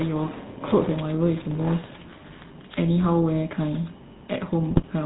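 The speech runs throughout over a GSM full-rate codec, which rebuilds the voice from a vocal-tract model driven by sparse, regularly spaced pulses, consistent with the 13 kbps full-rate scheme. Nothing above 4 kHz survives, and the voice carries a plainly audible buzzy, gravelly roughness. From 4.70 to 4.85 s, GSM bit errors corrupt the decoder's filter, pitch and gain values across several consecutive frames, pointing to a badly degraded radio link, and the voice breaks up into squawks, pops and gargling for that stretch.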